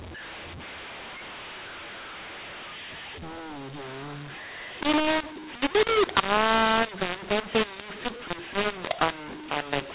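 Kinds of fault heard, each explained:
mu-law and A-law mixed up: The speech was coded as mu-law G.711 but decoded as if it were A-law, so every sample's level gets mapped through the wrong curve. Some levels come out too loud and others too quiet, which makes the voice sound harsh and distorted all the way through. The quietest samples are pushed well above silence, so the pauses fill with noise. The narrow telephone band, topping out around 4 kHz, is still intact.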